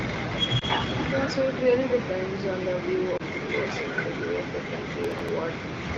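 At 0.59 to 0.65 s and again at 3.17 to 3.22 s, the speech briefly dips and warbles. These are lost AMR speech frames, one 20 ms frame each time. Radio errors corrupted the frame. The decoder patched the gap by repeating its last good pitch and vocal tract settings at falling gain.

From 5.04 to 5.29 s, a gritty crackle rides on the speech. This is processor overload crackle. About seven audio deadlines were missed over this stretch, which fits buffers of about 5 ms. Each miss replayed a piece of old audio with hard edges.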